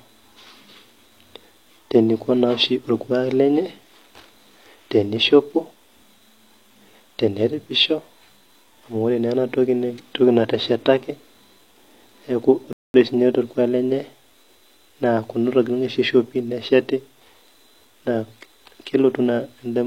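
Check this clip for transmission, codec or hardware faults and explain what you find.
One fault: a rebuffering stall from 12.73 to 12.94 s. Playback starved for data, inserting about 0.21 s of silence, then resumed seamlessly. Unlike a dropout, no speech is skipped.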